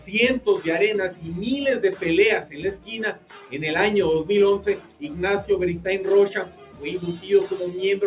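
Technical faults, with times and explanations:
Throughout: noise suppressor applied to music or sounds. Held tones pump and thin, swinging by about 10 dB, because a speech-tuned suppressor treats steady sound as noise.
1.11–1.28 s, 2.41–2.9 s, 3.13–3.54 s, 4.59–5.02 s, 6.45–6.83 s: sound cut by the noise suppressor. Sustained or decaying passages sink by about 9 to 10 dB as the suppressor clamps them.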